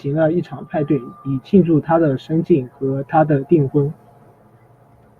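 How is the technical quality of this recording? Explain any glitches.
No glitches can be heard in the recording. There is nothing to explain, as the speech runs without any audible break, dropout or distortion.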